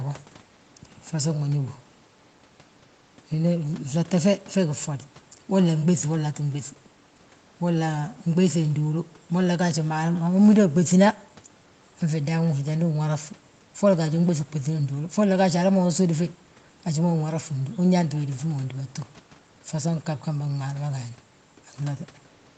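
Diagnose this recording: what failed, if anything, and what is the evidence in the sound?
Nothing failed in this recording, and the sound gives no evidence of a fault.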